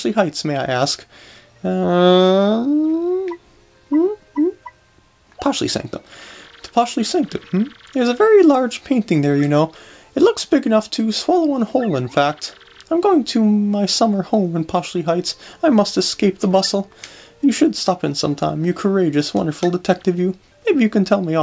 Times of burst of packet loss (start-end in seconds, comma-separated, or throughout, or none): none